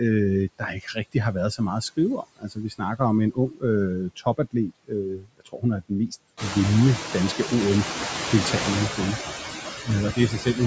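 A Danish speech clip where the noise suppressor artifacts run the whole way through. The background gets pulled down by about 11 dB between phrases and bobs back up under the talking, and the room noise climbs around 6.5 s. The suppressor also mistakes bits of the speech for noise and clamps them, so you get speech cut by the noise suppressor at 0.59–1.15 s (just before "har været så meget"), 2.23–2.81 s (between "så meget at skrive" and "om en"), 3.32–3.63 s, 4.16–4.54 s, 4.7–5.63 s (right before "er den mest vindende") and 10.14–10.59 s. Those spots dip by about 15 to 22 dB, and the one around 5 s loses roughly half a second of sound, so soft consonants and endings come out swallowed.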